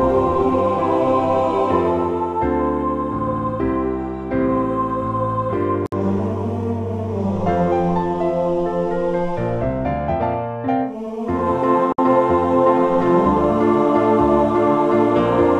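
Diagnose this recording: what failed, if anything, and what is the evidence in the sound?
The fault is a gap at a join of encoded pieces, introduced at the codec stage. Silence opens in continuous sound at 5.86 s for about 62 ms and again at 11.92 s for about 60 ms. The joins fall 6 s apart. Both edges are smeared by the codec. The sound then resumes where it stopped. Each piece was encoded separately and joined untrimmed, so encoder start delay and last-frame padding remain as silence.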